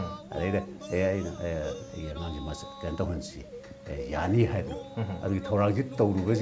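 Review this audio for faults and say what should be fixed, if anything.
Nothing here needs fixing.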